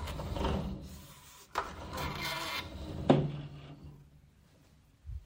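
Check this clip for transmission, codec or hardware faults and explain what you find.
No faults detected.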